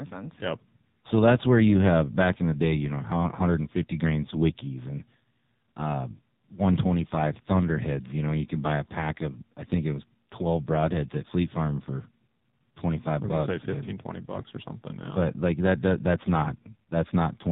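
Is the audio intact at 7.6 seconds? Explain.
No, not really. At 7.6 seconds you're hearing the same AMR narrowband mobile codec damage that runs through the whole clip. The speech is resampled to 8 kHz, so nothing above 4 kHz survives, and a vocal-tract model fed by sparse pulses rebuilds it in 20 ms frames. Damage is heavy here: the speech sounds buzzy and synthetic, which fits one of the low AMR-NB modes, around 5.9 kbps.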